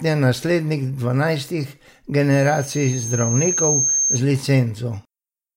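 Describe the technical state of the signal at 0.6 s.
At 0.6 s the signal is intact, with no dropout, distortion, or other technical fault audible at that moment.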